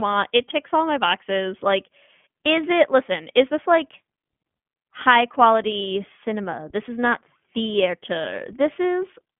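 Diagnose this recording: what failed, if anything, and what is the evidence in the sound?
The failure is at the codec stage: the speech has been through the iLBC codec for its whole length. Nothing reaches above about 3.6 kHz, and the band sits roughly between 150 Hz and 3.4 kHz, the classic narrowband telephone line. The codec damage is plainly audible as a rough, slightly synthetic edge on the speech. iLBC codes each short frame's excitation independently. The texture fits 20 ms frames at a rate near 15.2 kbps.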